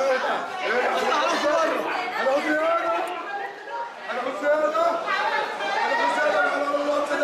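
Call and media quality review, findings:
Nothing to flag here; the audio holds steady the whole way with no dropouts, glitches or level jumps worth a ticket.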